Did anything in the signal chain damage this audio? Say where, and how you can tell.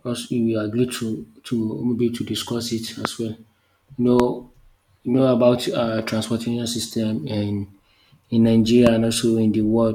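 Yes. Three loud pops, single sharp thumps far louder than the speech, hit at 3.05–3.07 s just after "discuss it", 4.20–4.22 s and 8.87–8.89 s, with the speech running on underneath. Each is a sudden voltage step, likely from an analogue wiring or connector fault.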